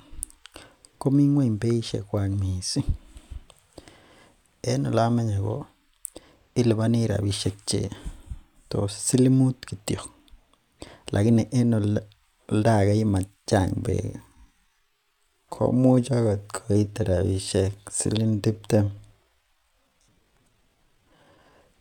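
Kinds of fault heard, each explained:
Time-stretched section: likely software lengthening part of the audio while keeping pitch, so from 13.65 s to 21.53 s the speech slows to about 0.69 speed, sounding dragged.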